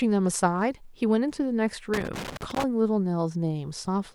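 From 1.94 to 2.64 s there's loose connector crackle: a worn contact keeps making and breaking, chopping the speech into an irregular scratchy burst.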